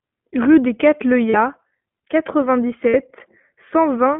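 From the start, the whole clip of speech carries iLBC codec coloration. The audio is confined to a telephone band of roughly 150 Hz to 3.4 kHz, so sibilants and air are missing. Each 20 ms frame's excitation is coded on its own, at a rate consistent with iLBC's 15.2 kbps mode, and the damage is plainly audible as a slightly rough, synthetic texture on the voice.

At 1.30 to 1.37 s come the first lost iLBC frames, about 40 ms long, which fits two dropped 20 ms frames. The decoder fills the hole by repeating the last pitch cycle with added noise, heard as a brief held, buzzy vowel. A second loss at 2.89 to 2.95 s lasts 60 ms, consistent with three frames, and the concealed stretch sounds slightly more drawn out. Because iLBC frames decode independently, the voice is back to normal immediately after each gap.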